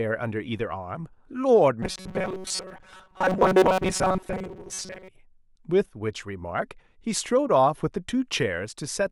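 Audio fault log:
1.82–5.09 s, robotic sound from repeated short buffers: speech becomes a rigid metallic buzz fixed at 188 Hz that loosely follows the words. This is likely a buffer of about 5.3 ms being replayed while most real audio is skipped. Unlike a pitch shift, the buzz ignores intonation.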